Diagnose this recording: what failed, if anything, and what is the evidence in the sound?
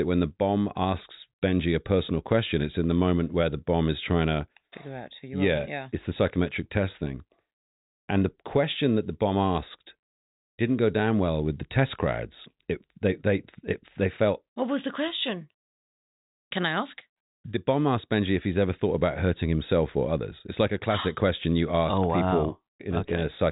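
Nothing failed: the speech carries the expected band limit of G.711 telephone coding, with no content above 3.8 kHz, and no stage of the chain adds any fault to the signal.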